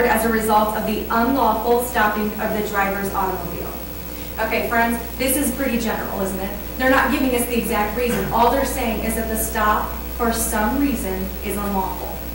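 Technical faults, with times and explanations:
Throughout, hard clipping: the signal was driven about 6 dB past what a converter or other stage could pass, so only a small fraction of samples, well under one percent, reach the ceiling. Those peaks are sliced flat, adding high harmonics heard as brief crackle on loud moments.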